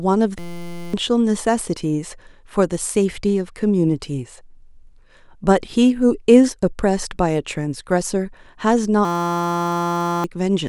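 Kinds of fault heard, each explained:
System hang loop: From 0.39 to 0.94 s and again from 9.05 to 10.24 s, the speech gives way to a steady buzz at about 172 Hz, losing roughly half a second and then about a second of speech. The system stalled while the audio hardware kept replaying one 5.8 ms stretch of its ring buffer, which fits a 256-sample buffer. That tiny fragment repeats until the system recovers.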